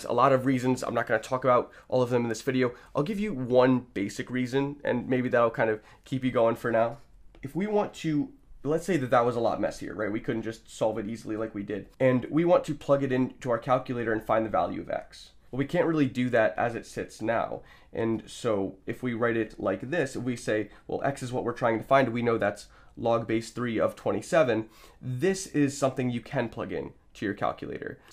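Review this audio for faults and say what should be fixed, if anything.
Nothing stood out on listening, so there is nothing here that needs fixing.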